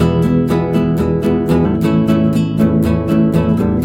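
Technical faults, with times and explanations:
1.64 s, damaged data in a compressed stream: a brief blip, about 12 ms long, cuts into the sound. A stretch of the encoded stream was corrupted at this point, so the decoder either misread those frames and turned garbage into a sharp artefact or discarded them. It then had to hunt for the next valid frame header before playback could continue cleanly.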